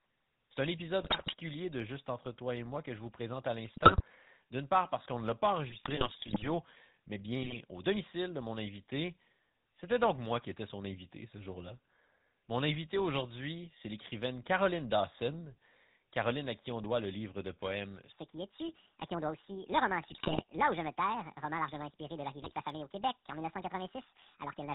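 Speech coded throughout with the GSM full-rate codec, and the damage is plainly audible. The voice has the buzzy, gravelly texture of a vocal-tract model excited by a sparse regular pulse train, and nothing survives above 4 kHz, so the top end is dull and the sibilants are blunted. The coarseness fits the 13 kbps full-rate GSM codec. Over this, short bursts of GSM bit errors appear at 1.01–1.34 s, 3.74–4.02 s, 5.70–6.49 s, 7.42–7.57 s, 20.02–20.44 s and 22.42–22.53 s. In each burst the decoder receives corrupted filter, pitch and gain parameters, so the spectrum warps and the level jumps frame by frame. The voice breaks into squawks, pops and gargling, and the longest, most sustained disturbance is at 5.70–6.49 s. From 18.12 s to the end, the section plays at the wrong speed, about 1.52 times too fast. Pitch and tempo rise together, lifting the voice roughly seven semitones, so it sounds high and hurried. 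The sudden change at 18.12 s points to a likely cause: that part was played back or resampled against the wrong clock rate, not altered by the speaker. The last two error bursts fall inside this sped-up section.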